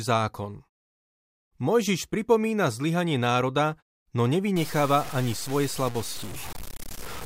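From 4.56 s until the end of the speech at 7.26 s, the audio turns coarse and grainy, with a distortion that tracks the signal and shifts as the level changes. The likely cause is low bit depth without dither, the waveform truncated to about 5 bits, leaving an error only some 15 dB under the signal. The muted pauses still fall cleanly to silence.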